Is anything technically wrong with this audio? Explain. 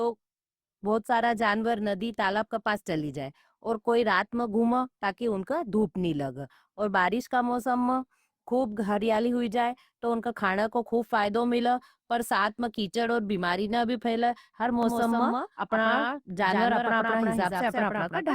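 Yes. From 14.83 s, right after "भी फैले हर", to the end of the clip, the speech turns into a hard, slapback echo: a second full-band copy trails the first by about 150 ms, roughly 5 dB quieter, with no decay or room colour, and it cuts in abruptly. This is a doubled audio track. The same signal is likely being mixed in twice, once through a slower capture path or from a misaligned edit, so the two copies overlap at a fixed offset.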